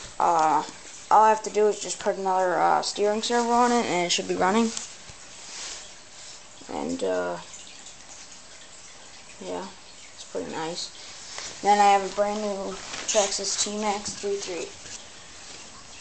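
No technical faults are audible.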